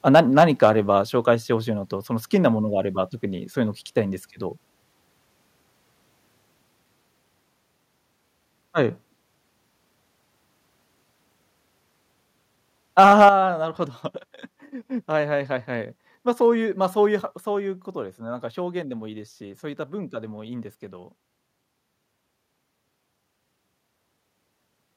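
From 0.07 to 0.7 s, input gain was likely set too high, causing microphone overload: speech peaks ran about 3 dB past the converter's limit and were flattened, giving a harsh, crackling edge. At 1.02 s, call software likely cut the microphone input volume in one step, so voice and background drop together by about 3 dB.

From 12.98 to 13.29 s, further overload likely clipped the peaks, again about 3 dB, across a larger share of the waveform, making the crackle heavier. At 13.29 s, right after that distortion, the volume was likely stepped down again, about 8 dB, a sudden drop. At 17.37 s, another step down, likely from the same automatic gain control, lowers the level by only about 1 dB.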